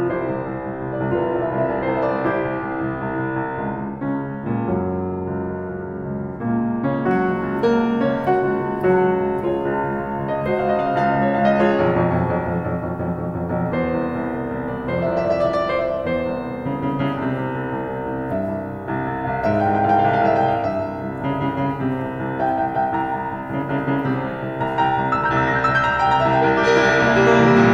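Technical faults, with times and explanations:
7.11 to 27.73 s, pre-emphasis left on. From 7.11 s the music turns thin, bright and sibilant. A treble boost made for transmission was never cut back. At 10 kHz the highs sit about 14 dB above 1 kHz, which fits the 75 µs FM curve.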